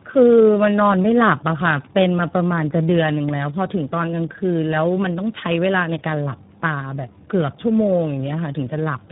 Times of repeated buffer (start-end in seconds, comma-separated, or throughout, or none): none